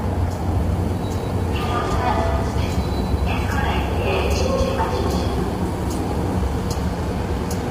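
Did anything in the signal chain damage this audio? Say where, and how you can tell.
Yes: the sound is rough and grainy throughout, with nothing above 15.6 kHz, pointing to a codec stage, likely low-delay AAC compression at a low bitrate near 24 kbps.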